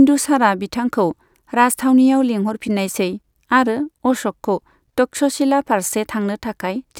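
No technical faults can be heard in the speech at any point.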